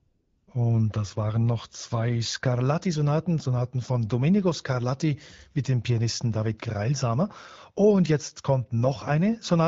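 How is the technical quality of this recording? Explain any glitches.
One glitch stands out, at the very start. The light coding character throughout fits AMR wideband (HD Voice) at around 12.65 kbit/s.

AMR comfort noise, 0.00 to 0.47 s: the phone treated the opening as silence and sent no speech frames, so the receiver substituted smooth, synthetic noise for the real background before speech begins.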